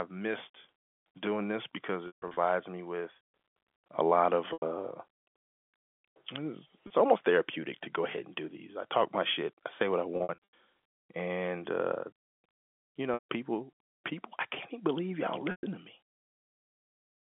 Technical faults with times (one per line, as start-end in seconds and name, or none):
2.07-2.37 packet loss with pitch repetition
4.53-4.62 packet loss with pitch repetition
6.87-6.90 packet loss with pitch repetition
10.17-10.52 packet loss with pitch repetition
13.14-13.23 packet loss with pitch repetition
15.51-15.63 packet loss with pitch repetition